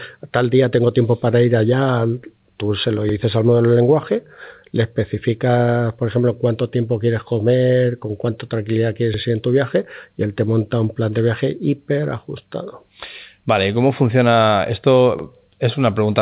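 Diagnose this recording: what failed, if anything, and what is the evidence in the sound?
Overlapping chunks at the buffer stage: each 6 s block starts 50 ms early, so that slice plays twice, stuttering at 3.09, 9.14 and 15.19 s.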